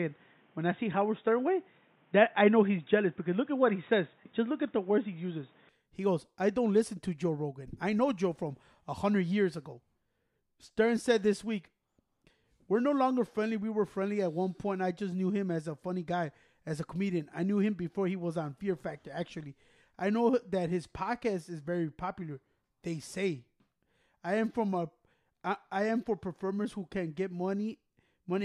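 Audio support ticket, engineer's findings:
Input switched to a poorer device, 0.0 to 5.69 s. Speech dull and boxy, nothing above 3.8 kHz, then full bandwidth returns at 5.69 s with no gap at the changeover. Level shifts by about 5 dB at the switch. The opening section carries its own background noise, roughly 40 dB under the speech. Likely cause: capture routed through a narrower-band input, such as a headset call profile or secondary microphone, before the system switched to the main device.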